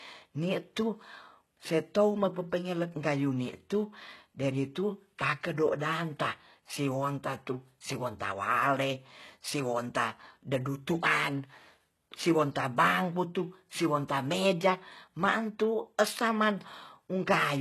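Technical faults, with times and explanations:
Throughout, HE-AAC compression: the encoder likely coded only the lower spectrum at a very low rate, around 16 kbps, and rebuilt the treble by copying lower bands upward, so sibilants sound gritty and lispy, harmonics misalign above the crossover, and nothing remains above 12.3 kHz.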